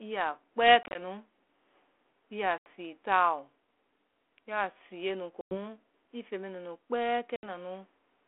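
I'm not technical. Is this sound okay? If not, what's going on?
No. Packet loss on an ADPCM call cuts short gaps into the speech at 0.83–0.99, 2.58–2.68, 5.41–5.58 (just before "ii feŋ mɛ nunu") and 7.36–7.45 s. Lost chunks become silence, and the phone's decoder briefly loses track, so speech resumes slightly distorted.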